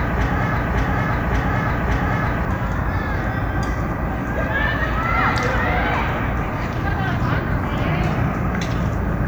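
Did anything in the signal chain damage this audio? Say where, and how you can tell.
Yes: playback likely stalled and resent its last fragment, a broken-record loop. A 0.57 s piece, already repeating at 0 s, repeats three times until 2.45 s, replacing the lost audio.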